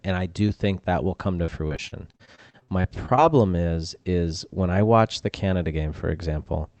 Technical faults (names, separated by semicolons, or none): repeated packet loss (robotic sound)